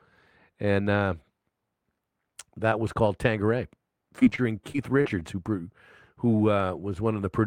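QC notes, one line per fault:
4.19–5.23 s, repeated packet loss (robotic sound): a run of short dropouts, none longer than 35 ms, each patched by stretching the sound just before it. About 14% of that span is filled-in sound, so the audio turns choppy.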